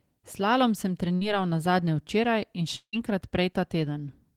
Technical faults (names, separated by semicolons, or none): burst of packet loss; long network dropout